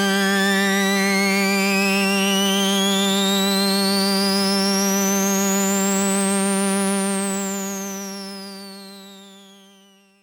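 A fine hiss and roughness rides on the louder, brighter passages throughout: sample clock jitter of a few microseconds, leaving error about 25 dB below the signal.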